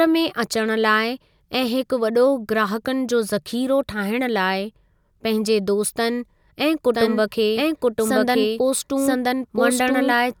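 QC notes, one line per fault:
6.94 s to the end: doubled audio track. A second copy of the speech cuts in abruptly and runs about a second behind the original, roughly as loud, so two overlapping streams compete until the clip ends. The copy is full-band and dry, with no decay or room colour, which rules out a natural echo. The likely cause is the same audio being captured again through a slower path, or an edit leaving two copies out of step.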